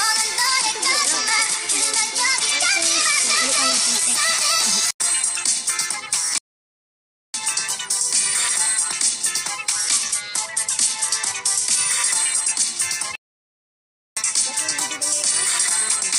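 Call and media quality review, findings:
Bluetooth SBC bit pool drop, 0.47–4.15 s and 9.71–11.79 s: treble dulls, gritty noise rises, then clears. Fits the bit pool falling from 31 to 12, roughly 88 kbps, with upper sub-bands starved.

Playback stall, 6.38–7.34 s and 13.15–14.17 s: output goes silent for about 0.96 s and 1.01 s, then resumes. Likely a player buffer underrun or blocked audio thread.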